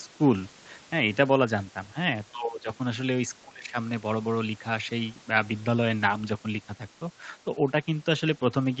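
Speech suppressed in double talk cuts into this speech recording at 2.31 to 2.68 s and 3.42 to 3.76 s, dropping it by about 20 dB, likely an echo canceller turning the talker down while the far side spoke.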